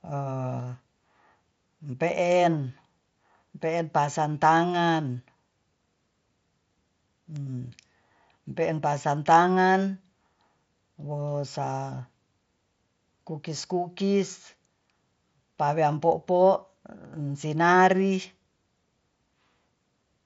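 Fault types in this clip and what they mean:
Bit error spike: A single flipped bit in the digital sample data makes the waveform jump by a power of two and snap straight back. Here it spans about two samples at 7.36 s, heard as one sharp, broadband tick with no relation to the speech around it. The error lies in the stored or transmitted sample values, not in the acoustics or the microphone.
Concealed Bluetooth headset packet loss: When voice data between headset and phone goes missing, the receiver fills the hole by repeating a well-matched stretch of the speech just before it. This clip has two isolated gaps of about 7.5 ms each, at 13.59 s and 15.92 s, which fits one lost packet apiece. Being single short losses, they are almost hidden in the mSBC wideband speech.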